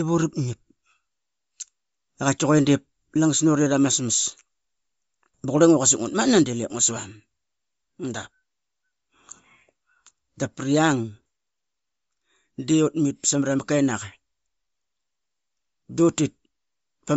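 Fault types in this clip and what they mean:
Bluetooth LC3 compression: The speech has a plainly audible breathy, grainy edge throughout, and nothing is heard above about 7.7 kHz, so the top of the band is simply absent. This is likely the LC3 codec used by Bluetooth LE Audio, which codes the signal in short transform frames. At a low rate, consistent with roughly 32 kbps and 10 ms frames, it discards much of the upper spectrum and substitutes shaped noise, producing that coarse, hissy texture.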